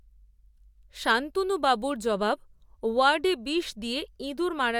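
No technical faults can be heard anywhere in the recording, with the signal holding steady throughout the speech.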